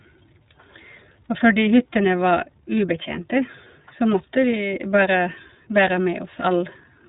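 From start to end, iLBC codec damage is plainly audible. The speech is band-limited, with nothing above 3.8 kHz, and sounds rough and synthetic, which fits coding each 30 ms frame on its own.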